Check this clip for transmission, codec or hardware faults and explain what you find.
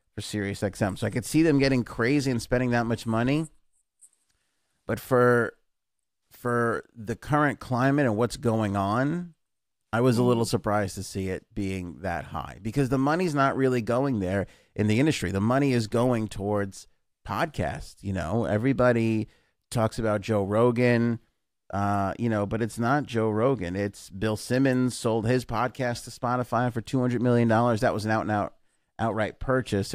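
Nothing stood out on listening to this speech recording.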